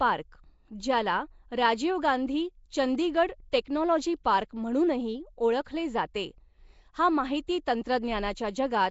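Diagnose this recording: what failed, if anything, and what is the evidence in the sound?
The codec stage is at fault throughout this speech. The sound carries a rough, hissy halo and a smeared, underwater quality, with nothing above 7.7 kHz. The likely cause is Nellymoser compression at a rate fitting 32 kbps: fixed two-bit-per-sample blocks, with starved bands filled by noise.

Pre-echo, also a codec artefact, appears at 3.52 s just before "टेक्नॉलॉजी पार्क म्हणूनही ओळखले", at 4.24 s before "पार्क म्हणूनही ओळखले जाते", and at 7.47 s. Each is a 10 to 15 ms hiss ahead of a sharp attack, where quantisation noise spread across the block spills into the quiet lead-in.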